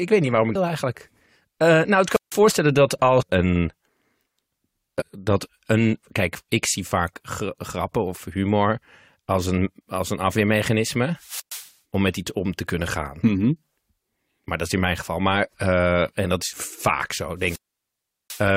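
Right after "weet niet waarom ik", at 0.52 to 0.56 s, there's a burst of damaged data in a compressed stream. Some bytes in the coded file were wrong, so the decoder misread or dropped those frames and had to hunt for the next valid frame header. You hear it as a brief chirp, squawk, click or gap. Two more land at 3.21 to 3.23 s and at 5.00 to 5.02 s, the second just before "dat een".

Between those, at 2.10 to 2.38 s, comes the first wireless microphone squelch dropout. The FM signal from the mic faded far enough that the receiver's squelch shut the output off, which sounds like hiss or static rising before a hole of near silence, here about 155 ms of it. The second runs from 11.15 to 11.73 s with a mute of about 118 ms, ending just before "om met iets om". The last, at 17.37 to 18.47 s, has the longest mute, about 745 ms.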